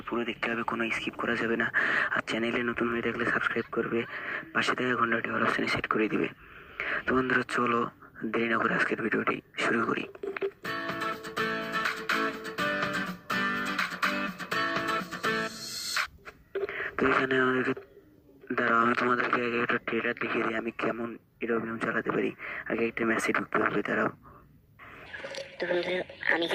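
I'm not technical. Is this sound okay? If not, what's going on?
Yes, nothing wrong can be heard in this sound.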